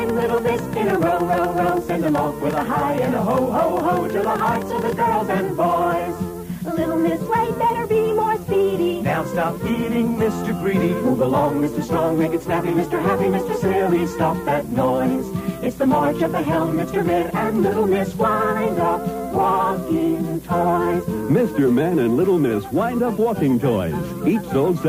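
A train of clicks runs from 0.09 to 4.93 s, around fifty near-identical pulses at roughly 9.3 per second with uneven spacing, peaking about 5 dB above the audio. It is likely interference or a faulty connection injecting pulses, heard as irregular ticking.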